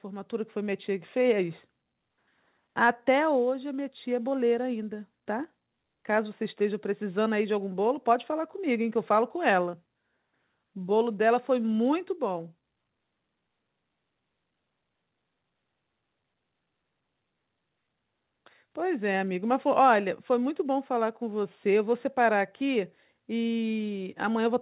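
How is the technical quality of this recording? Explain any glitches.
The main glitch is a slow level creep at the start. From 0.05 s to about 12.5 s there's an automatic gain rising effect: the gain control decided the input was too quiet and kept nudging it up, by about 6 dB overall, so the speech and the background noise swell together over those twelve seconds. The audio also stops at 4 kHz, which fits a narrowband call path like G.711.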